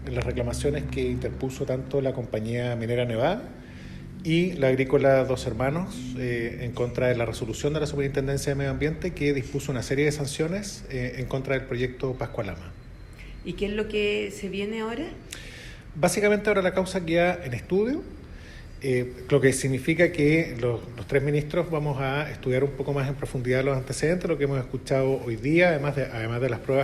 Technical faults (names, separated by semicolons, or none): none